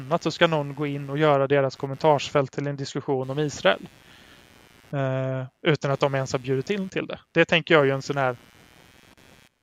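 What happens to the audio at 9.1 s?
At 9.1 s a faint buzzing, chirping texture sits under the speech, pulsing at around a hundred times a second and roughly 30 dB below it. It runs through the whole clip, so this moment is no exception. This is computer activity noise: as the processor, graphics card or mouse draws changing current, the shared ground of the audio circuit shifts, and that disturbance rides into the recording, following the machine's workload rather than the speech.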